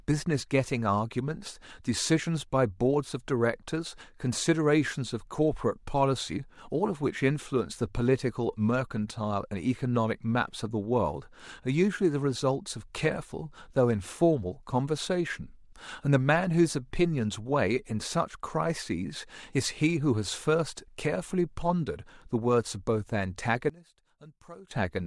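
A speech clip in which, from 23.70 to 24.71 s, the speech drops by about 22 dB to a faint remnant, likely because one channel was inverted, so centred content cancels when summed to mono.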